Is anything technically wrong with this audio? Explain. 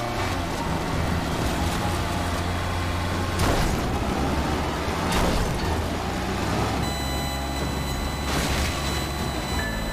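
Yes. From 6.83 s to the end at 9.92 s there is USB whine: current drawn in the bus's 1 ms frames leaks through power or ground, giving a steady 1 kHz tone whose 4 kHz harmonic dominates, roughly 10 dB below the signal. Unlike 50 or 60 Hz mains hum, it sits on a kilohertz grid.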